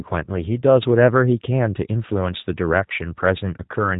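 The whole speech clip runs through a G.729 codec, and it shows: nothing above 3.8 kHz, a rough, slightly synthetic edge, consistent with an 8 kbit/s link.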